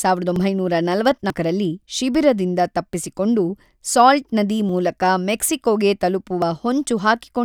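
At 0.36, 1.30, 4.69 and 6.42 s the speech jumps ahead, losing roughly 40, 70, 20 and 20 ms with no gap. That's likely a dropped buffer (overrun), where samples were overwritten before being read and the edges got spliced together.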